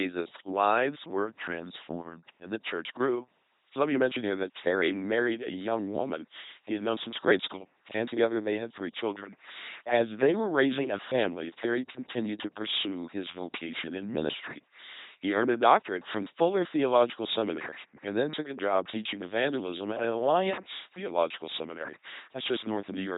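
Speech here, and it's been squashed through an LPC-10 vocoder at 2.4 kbit/s the whole way. It has that buzzy, mechanical robot quality you get when every instant is forced to be either pulse-driven or noise-driven, with nothing above 3.8 kHz. There are also word clock ticks running from 0.33 s to 23.01 s, sharp clicks at a steady rate of roughly one every 0.3 s, around a hundred in all. That sounds like an unlocked digital link whose receiver clock is off by something like 70 ppm, with each tick fitting a single sample being dropped or repeated as the clocks slip.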